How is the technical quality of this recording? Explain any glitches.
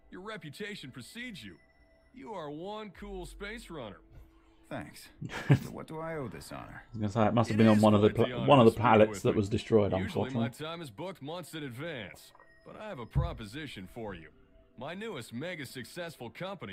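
No glitches turn up anywhere in this recording. There is nothing in the sound that calls for an explanation.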